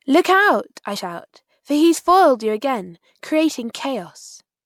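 At about 0.95 s there's a case of compressed frames skipped. A couple of the codec's 24 ms frames never get played, so the speech lurches forward by roughly 50 ms, as if a sliver of time was snipped out. Either those frames were missing from the stream or the decoder rejected them as corrupt.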